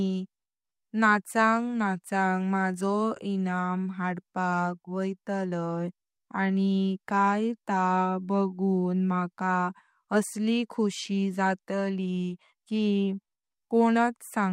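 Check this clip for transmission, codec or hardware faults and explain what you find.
Nothing in this speech recording points to a fault of the sort asked about. No dropouts, glitches or other disturbances stand out at any point.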